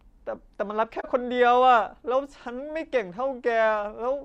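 At 0.99 s an AAC frame loss with muting occurs: a lost frame of about 43 ms, fitting a single frame, is decoded as silence. The overlapping windows fade the speech out and back in, leaving a brief dip until 1.06 s.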